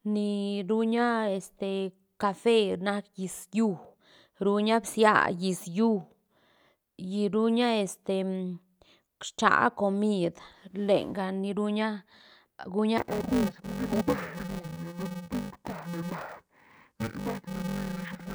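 From 12.98 s to 18.35 s, interleaved audio is read as planar: each 128-sample block, about 2.9 ms, is split into halves treated as separate channels. Blocks this short turn the speech dull and robotic, buzzing at 345 Hz, without a clear octave drop.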